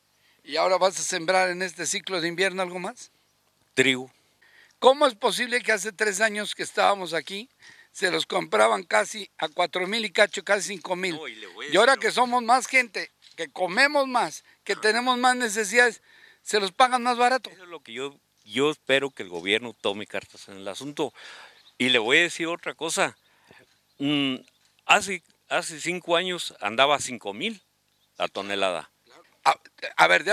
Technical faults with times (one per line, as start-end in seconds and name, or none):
none